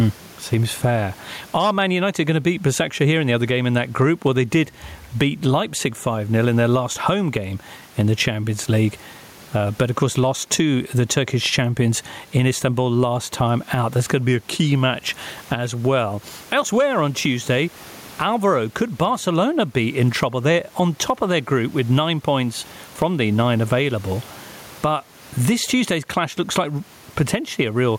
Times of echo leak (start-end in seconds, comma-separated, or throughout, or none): none